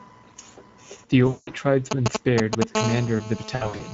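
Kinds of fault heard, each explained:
Speex codec: A CELP speech codec from older VoIP and game chat is coding this speech throughout. At a rate that fits about 16.8 kbps, the excitation is thin. The damage is plainly audible. The voice sounds noisy and hoarse. The upper band is not real detail. It is only a shaped, noise-like fill above 4 kHz.
VoIP packet loss concealed by the speech codec: Packets go missing twice, and the decoder fills each gap by repeating its last pitch and filter at falling gain. From 1.27 to 1.53 s, about 200 ms of audio is rebuilt this way. The sound smears and fades. From 3.55 to 3.81 s, losses of up to 60 ms are scattered over 240 ms. The sound stays weak or distorted across that stretch.
GSM signalling bursts: A 2G phone nearby sends short groups of radio bursts while signalling. The audio circuit rectifies them into sound. From 1.91 to 2.64 s, a galloping dit-dit-dit pattern of brief 217 Hz buzzes breaks in. 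It sits at roughly the level of the speech, so it is hard to ignore. It has no link to what is being said.
GSM phone buzz: Once the phone is in a call, it transmits steadily in bursts 217 times a second. Rectified pulses become a hard, raspy buzz at 217 Hz, rich in harmonics. It starts at 2.75 s and runs to the end. It sits about 8 dB below the speech. It is steady and unrelated to the voice, and it overlaps the later concealment gap.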